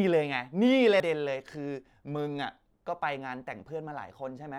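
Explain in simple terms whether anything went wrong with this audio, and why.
Damaged data in a compressed stream, at 1.0 s: a short stretch of the compressed speech file was corrupted. The player couldn't read that piece properly, lost its place, and hunted for the next readable chunk, leaving a brief chirp or blip.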